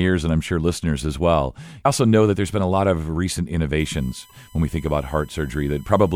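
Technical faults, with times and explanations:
3.79 to 6.16 s, USB whine: A thin, steady whistle appears under the speech at 3.79 s and lasts to the end of the clip, roughly 30 dB below the speech. Its fundamental is 1 kHz, but the strongest part is the 3 kHz harmonic, which gives it a sharp edge. The 1 kHz pitch matches the bus's 1 ms frame rate. Each frame draws a burst of current, and that ripple leaks into the audio through shared power or ground.
4.28 to 4.32 s, damaged data in a compressed stream: A short glitch cuts across the speech for about 33 ms. Part of the compressed stream was corrupted, so the decoder could not read those frames and lost its place. It then discarded data until it found the next valid frame header, which causes the glitch.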